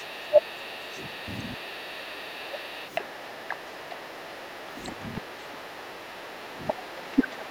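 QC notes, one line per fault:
0.0–1.21 s and 1.44–7.51 s, other side's voice leaking through. A faint second voice sits under the talker, roughly 35 dB down at first and about 30 dB down later. The likely cause is loudspeaker playback reaching the microphone that the echo canceller failed to fully remove.
0.28–0.42 s, 0.7–0.76 s, 1.25–1.32 s and 1.64–1.69 s, speech suppressed in double talk. The talker's voice briefly dips while the far side plays on the loudspeaker. The dips are deep, around 25 and 20 dB, in the first two places and shallower, near 10 dB, in the last two. This is likely the echo canceller turning everything down during overlap.
5.92–6.12 s, background gated by the echo canceller. The room sound drops by about 6 dB for around 150 ms, then returns. The canceller clamped the microphone while the loudspeaker played, briefly pulling the background down with it.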